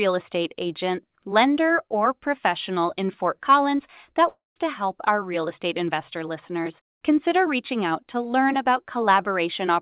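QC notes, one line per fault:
4.28–4.58 s, long network dropout: audio packets likely stopped arriving for about 280 ms, so the receiver had nothing real to play. It stretched the last sound into a fading buzz or hiss, filling about 276 ms, then fell to about 170 ms of near silence before the sound picked up again with that stretch simply gone. On this G.711 mu-law call path, with nothing above 4 kHz, the concealment sound is dull and narrow.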